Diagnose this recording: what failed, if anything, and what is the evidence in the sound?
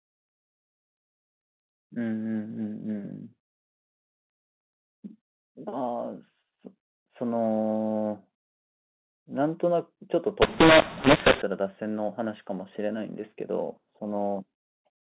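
At the codec stage, G.711 samples encoded as mu-law were decoded as A-law from 10.42 to 11.42 s, so every 8-bit code maps to the wrong level. For that one second the speech turns harsh and distorted, and quiet gaps fill with noise instead of near-silence.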